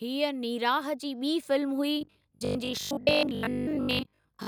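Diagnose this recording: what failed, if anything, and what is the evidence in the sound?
Automatic gain rising in call processing: from 0.05 to 1.54 s, voice and background swell together by about 5 dB as the gain control slowly turns up.

Robotic sound from repeated short buffers, 2.01 to 4.47 s: a stiff 50 Hz buzz. That's likely a starved buffer replaying its last 20 ms, skipping about half the audio.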